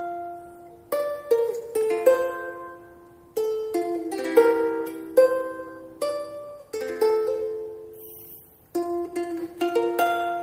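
No technical faults can be heard anywhere in the clip. Nothing in the sound points to a broken stage in the chain that carried it.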